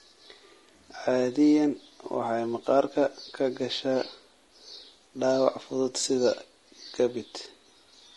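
Throughout this speech clip the voice sounds rough and grainy, with noise filling the gaps between harmonics, most likely from low-delay AAC compression (AAC-ELD) at a bitrate that fits about 32 kbps. As in ordinary AAC, the roughness comes from coarse quantization of the spectrum at a low bitrate.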